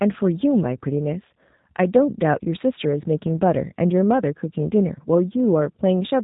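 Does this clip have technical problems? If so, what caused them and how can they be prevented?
Yes. Throughout, the speech shows G.729 codec damage. It is cut off above 4 kHz and has a rough, synthetic edge from being resynthesised out of a few pulses per frame, which fits an 8 kbit/s stream. Unlike plain telephone band-limiting, the voice itself sounds rebuilt. To prevent it, use a wideband codec such as Opus or G.722.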